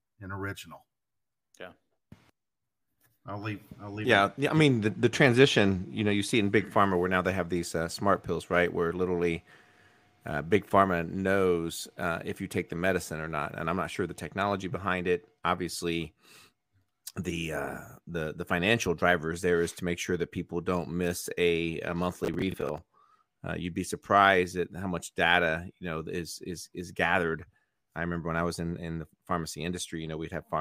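From 22.24 to 22.78 s the speech carries a burst of processor overload crackle: the processor repeatedly failed to finish its small audio buffers on time, each roughly 10 ms long, and about fifteen deadlines were missed. Each miss replayed a fragment of old audio with hard edges, so the result is gritty tearing rather than silent gaps. Unlike a single dropout or a codec glitch, it clusters at buffer-length spacing and stops once the load passes.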